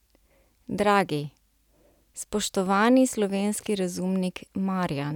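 No technical faults are audible in this speech recording at any point.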